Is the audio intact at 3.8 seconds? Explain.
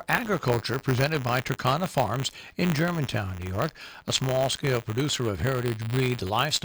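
No. At 3.8 s, as throughout the clip, there is buffer tearing: the writing program and the playback hardware have drifted so that their positions cross inside every period. A small slice of each buffer, a couple of percent, still holds audio from one lap earlier, some 20 ms old, spliced in with hard edges. Repeating every buffer, this produces a robotic 100 Hz buzz riding on the sound whenever signal is present.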